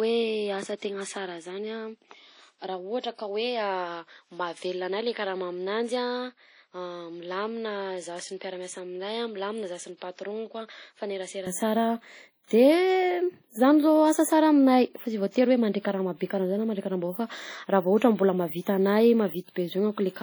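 Speech runs through the whole recording with heavy codec damage: a ringing, washy quality and hiss that swells and fades with the voice, likely from WMA compression at a low bitrate, which fits around 32 kbps. On a spectrogram, weak detail appears as patchy gaps and smeared blocks rather than clean harmonics. From the start to 11.47 s the sound is duller and roughly 10 dB quieter, with a noise floor about 50 dB under the signal, likely because the input was switched to a poorer device. The spectrogram shows nothing above 10 kHz there, and the waveform is visibly smaller until the switch back, which happens with no silence. At 18.61 to 18.67 s there is pre-echo: a 52 ms wash of hiss ahead of a sharp attack, which sounds softened. It appears as a smear on the spectrogram just before the onset.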